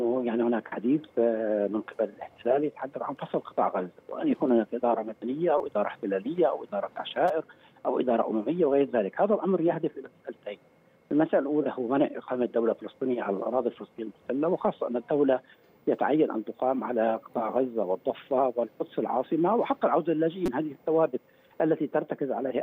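At 5.58 to 5.60 s, 7.28 s and 20.46 to 20.48 s the playback device ran short of fresh audio and replayed its last buffer, a repeated buffer fault. Each 5.33 ms block, which fits a 256-sample buffer, plays four extra times at the first and third points and three extra times at the second, with a hard join at every repeat. At that length the repeats fuse into a brief buzz near 190 Hz, and roughly 15 to 20 ms of sound is lost each time.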